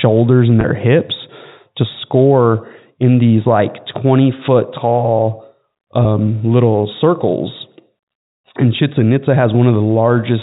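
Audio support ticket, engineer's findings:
Packet loss with pitch repetition, two events. 0.61–0.64 s, just before "hips to score in": a brief held, buzzy smear where the last pitch period loops to fill a 30 ms gap, consistent with three 10 ms packets dropped. 6.04 s, just before "little circles": same buzz, shorter, about 10 ms, fitting a single lost packet. Probable component: receiver-side concealment on the G.711 mu-law path, which sounds like a standard 64 kbps telephone stream.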